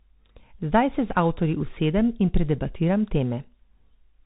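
From start to finish the speech runs through a Bluetooth CVSD headset codec, and it's plainly audible. Nothing gets through above about 3.8 kHz, so everything sounds boxed-in and phone-like. CVSD sends a single up-or-down bit per sample, which fits a 64 kbps stream, with a step size that keeps adapting. Fast, loud high-frequency bits outrun that step and break up, s sounds come out scratchy, and a grainy hiss sits underneath the whole time.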